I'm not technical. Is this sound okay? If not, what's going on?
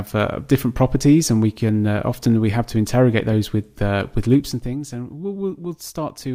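No. Between 4.31 and 4.78 seconds there is zipper noise. The system turned the volume down in a handful of coarse jumps, about fifteen a second, instead of one smooth slide, and it dropped by a fair amount over that half-second. Each jump makes a tiny click, and together they sound like a quick ticking or zipping laid over the sound as it gets quieter.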